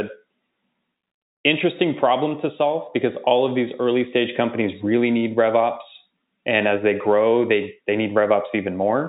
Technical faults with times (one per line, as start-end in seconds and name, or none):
none